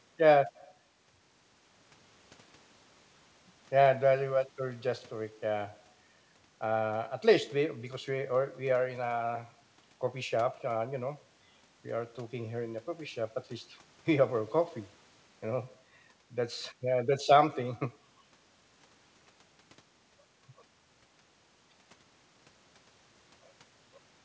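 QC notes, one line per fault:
Nothing to flag here, just speech carried over a call path that's doing its job, with the top end stopping at 8 kHz as you'd expect from a G.722 link.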